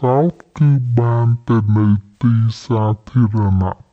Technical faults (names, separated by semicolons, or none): stereo read as mono